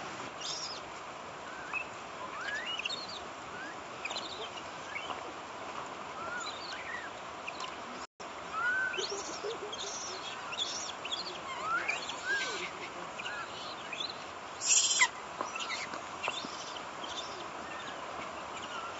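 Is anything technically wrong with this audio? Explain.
Yes. There is one playback stall, from 8.05 to 8.2 s. The sound stops abruptly in mid-flow and goes silent for about 145 ms. It then resumes. The likely cause is that the player's buffer ran dry or its thread was briefly blocked, so no samples reached the output until it caught up. The gap is short but clearly audible as a hole in the sound. The loss of the lowest bass comes from call microphone processing and is not a fault.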